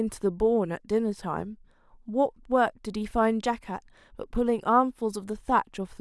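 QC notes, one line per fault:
No faults heard in this speech recording.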